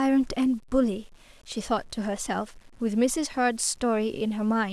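Speech runs through the whole clip with a grainy, buzzy distortion that rises and falls with the voice. Quiet passages and word tails turn gritty and break up, and near-silent moments sputter or cut to nothing. That points to low bit depth without dither, likely an 8-bit rounding step, with error sitting roughly 35 dB under the speech. Unlike dithered quantisation, which leaves a steady hiss, this error tracks the signal and vanishes when it stops.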